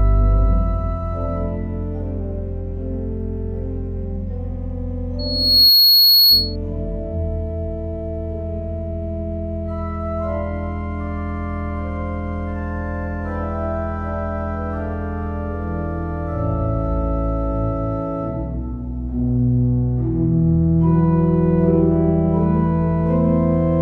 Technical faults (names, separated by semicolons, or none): loudspeaker feedback squeal